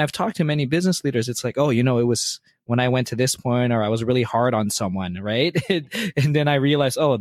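No technical faults can be heard anywhere in this recording.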